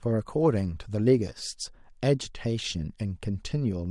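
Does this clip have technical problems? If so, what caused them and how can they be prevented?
No technical problems are audible.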